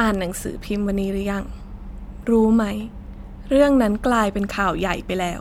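No technical faults can be heard anywhere in the recording.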